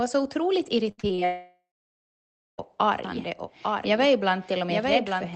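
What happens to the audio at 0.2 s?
Nothing goes wrong at 0.2 s: the speech there is intact, with only the ordinary coding character of the Opus call path, whose band limit sits around 8 kHz.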